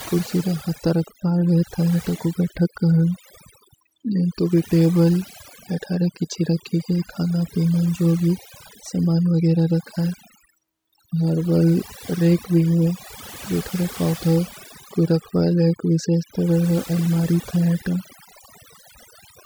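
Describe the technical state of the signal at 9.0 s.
At 9.0 s the speech carries overdone noise removal, present across the whole clip. Noise reduction set too hard cuts frequency bands that sit near its noise estimate, taking quiet parts of the voice too. Gaps between sounds fall to near silence with twinkling specks.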